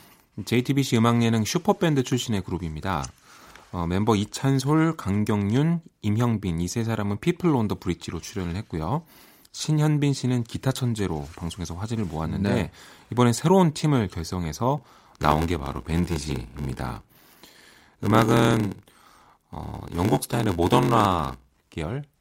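From 14.77 to 21.74 s the speech has a block size mismatch, with padding. Each block arrives short and is filled out with silence. This causes a buzz at about 86 Hz, fitting 512-sample blocks. Speech slows to 0.861 times normal speed, timbre unchanged.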